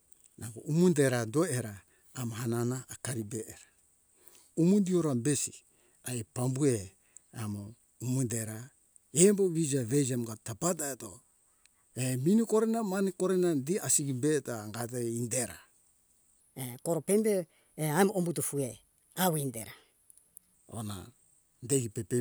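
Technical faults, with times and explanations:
16.40–20.54 s, section at the wrong speed: for about four seconds the speech jumps up in pitch by roughly three semitones and runs noticeably hurried, then drops back to its normal register and pace at 20.54 s. Pitch and tempo shift together because the passage plays 1.21 times faster than it was recorded, likely from an editing or playback step that ran this stretch against the wrong clock rate.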